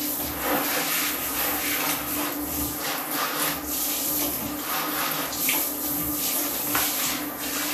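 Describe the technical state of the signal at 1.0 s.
At 1.0 s the sound is hissy and grainy, with roughened tones, blurred attacks and nothing above 14.2 kHz, and this damage is plainly audible across the whole clip rather than at that moment alone. The likely cause is Vorbis compression at a low setting, which fits a bitrate around 37 kbps: the encoder lowers its cut-off and quantises the treble residue so coarsely that fine detail is replaced by noise of similar energy.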